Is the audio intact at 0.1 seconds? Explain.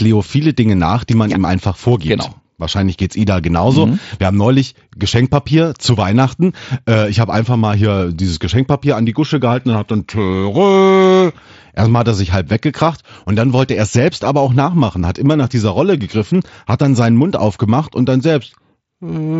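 Yes, the speech at 0.1 seconds comes through intact, with no fault at that moment.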